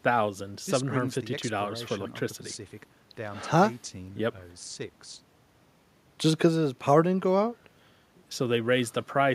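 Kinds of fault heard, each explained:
No technical fault can be heard anywhere in this speech clip. There is nothing to list under any kind of fault.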